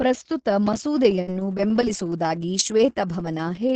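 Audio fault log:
0.67–0.78 s, processor overload crackle. The processor kept missing its deadlines for small audio buffers, apparently about 5 ms each. Roughly seven were dropped in a row, each leaving a hard-edged gap of silence. Together they make a short burst of gritty crackle on the speech.
1.21–1.30 s, short stall from a late packet. A packet arrived late and the jitter buffer ran dry. The receiver stretched the last sound by 56 ms until the packet came, then carried on. Nothing is lost, but the sound hangs audibly too long.
1.27–1.33 s and 1.87–1.93 s, lost packet rebuilt from error correction. A packet was lost each time. The next packet carried a low-bitrate Opus copy, which filled 60 ms with no gap. Those frames sound rougher and noisier than the surrounding 20 kbps call audio.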